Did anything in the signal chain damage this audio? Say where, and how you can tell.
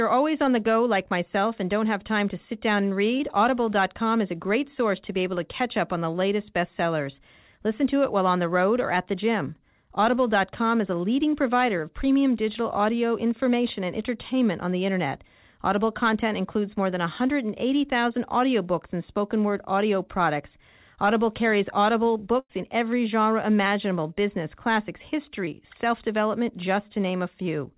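Yes, it's the network leg of the call. At 3.18 s and again around 25.45 s there's a brief smear or wobble where roughly 20 ms of audio didn't arrive. That's short concealed packet loss: the receiver stretched the last sound for about 12 to 14 ms and then blended back in.

The bigger hit is a burst of packet loss from 22.39 to 22.51 s. About 100 ms is gone, and you hear the last sound held as a buzz or hiss that fades out before the audio picks up further along. The receiver was padding over nearly the whole gap. The band-limited sound, with nothing above 4 kHz, fits a G.711-style call codec.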